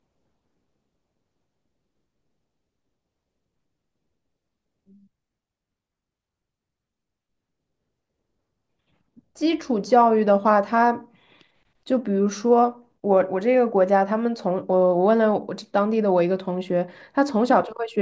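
No technical faults can be heard anywhere in the speech. Nothing in the recording stands out as a problem at any point.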